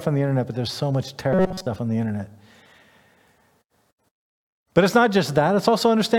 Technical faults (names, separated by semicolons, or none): robotic sound from repeated short buffers